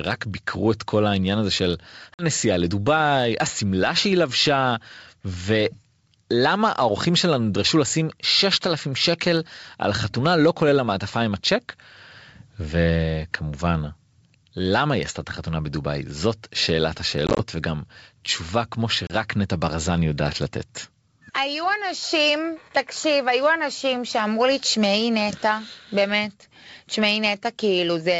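Packet loss on an ADPCM call at 2.14–2.26 s (50 ms lost), 17.27–17.40 s (70 ms in short runs of up to 20 ms) and 19.07–19.12 s (30 ms) leaves hard-edged silent gaps. Each time, the decoder's predictor and step size drift from the sender's, so the speech resumes slightly off before settling.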